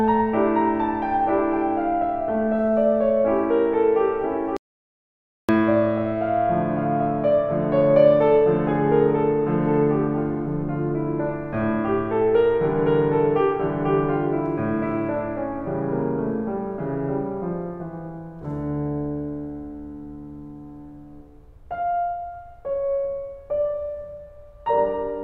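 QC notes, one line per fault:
4.57–5.49 s, audio dropout to silence: the music stops abruptly mid-flow and the gap is dead silence, with no room tone or decay tail, before the music cuts straight back in about 0.92 s later. Whatever was playing in that stretch is simply missing. The likely cause is a momentary loss of the input signal, such as a dropped connection, a device glitch or a brief mute, while the recorder kept writing silence.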